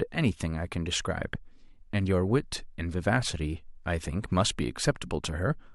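At 1.35 to 1.37 s a single sharp pop cuts through the speech, standing a few decibels above it for a moment while the talking carries on unbroken underneath. This loud pop is a brief electrical transient riding on top of the signal rather than a break in it. The likely cause is a sudden voltage step or spike, such as a plug being moved, a switch, a static discharge or a driver glitch, that the downstream circuitry shaped into one short thump.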